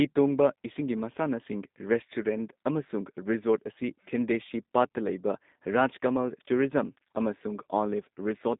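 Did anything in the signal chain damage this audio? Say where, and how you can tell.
Yes, at the codec stage: G.729 coding runs through the whole speech clip, with the band confined to about 200 Hz to 3.7 kHz and a plainly rough, synthetic texture that fits an 8 kbit/s coder rebuilding each frame from a filter, pitch predictor and sparse pulses. A plain telephone band filter would narrow the sound without this buzzy roughness.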